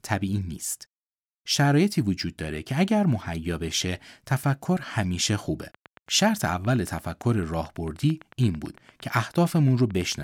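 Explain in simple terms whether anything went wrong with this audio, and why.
Something did go wrong. From 5.63 s to 10.13 s a train of clicks runs over the speech: about forty sharp ticks at a steady 8.9 per second, roughly as loud as the speech itself. A regular pulse like this likely comes from electrical interference or a faulty connection or power supply.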